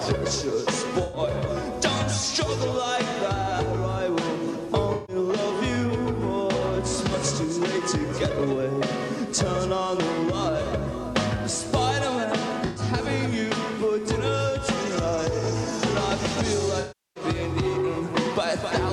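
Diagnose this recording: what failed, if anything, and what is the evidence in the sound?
AAC frame loss with concealment at 1.03, 4.93, 12.65 and 16.79 s (the last about 0.36 s): at the codec stage, the decoder rebuilt missing frames from earlier spectrum, leaving smeared patches.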